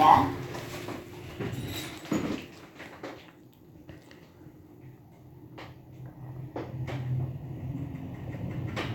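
No technical faults can be heard anywhere in the recording.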